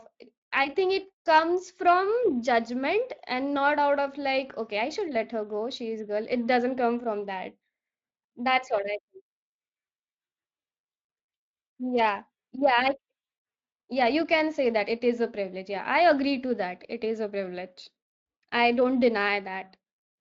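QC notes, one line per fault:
No faults to log.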